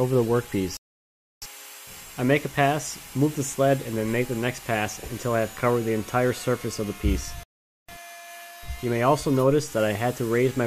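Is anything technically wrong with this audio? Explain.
Yes. At 0.77 to 1.42 s and 7.43 to 7.89 s the sound drops to silence for 0.65 s and 0.45 s, then picks up exactly where it left off. These are rebuffering stalls: playback ran short of downloaded audio and paused until more data arrived.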